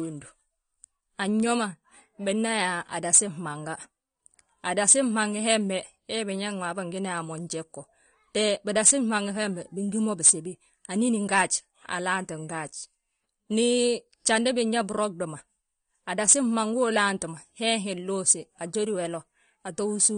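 From start to finish the speech sounds dull and smeared, with a fizzy, warbling texture clinging to sibilants and sustained sounds, and nothing audible above about 9.7 kHz. This is likely AAC compression, with AAC-LC at a low bitrate, which fits a stream of around 32 kbps. The encoder runs short of bits, so it drops the top of the spectrum and coarsely quantises what remains.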